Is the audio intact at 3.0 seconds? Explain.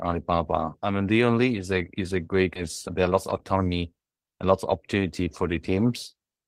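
No. At 3.0 seconds the speech is inside a jitter buffer speed-up running from 2.95 to 5.27 s. With too much audio queued, the receiver repeatedly cut out short pitch-period-sized pieces, trimming roughly a third of a second in total so the speech plays at about 113% speed. It sounds hurried but keeps its normal pitch, which separates it from a simple playback-rate change, where the pitch would rise along with the speed.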